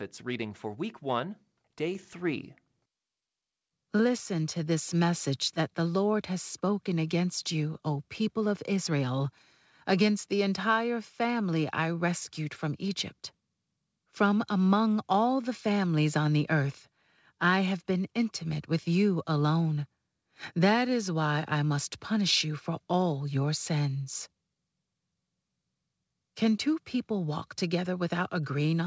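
At 1.95 s the microphone volume is stepped up. The input level jumps by about 5 dB in a single step. Voice and room background get louder together. This points to automatic gain raising a quiet microphone. The call path's band limit, with nothing above 8 kHz, fits a wideband codec such as G.722.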